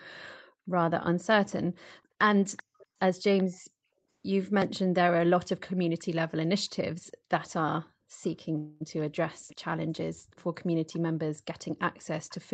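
Echo leak, most likely from a far-end loudspeaker whose echo canceller let part of its microphone pickup return, puts a faint delayed copy of the speech about 385 ms behind the original at 2.57 to 3.44 s (about 20 dB down), 7.05 to 7.51 s, 8.22 to 9.56 s, 10.31 s and 11.78 to 12.40 s, ranging from about 35 to 25 dB below. At 8.57 to 8.83 s, a call audio freeze, with stalled packets likely leaving the jitter buffer empty, fills 231 ms with a stretched, fading continuation before the speech resumes with nothing lost, just later.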